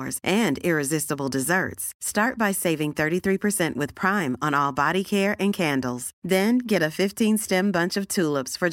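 No fault is audible anywhere in the speech.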